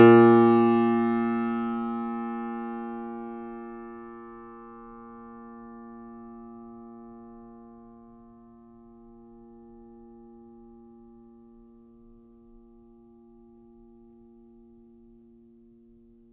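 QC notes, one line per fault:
Nothing stood out on listening to this music.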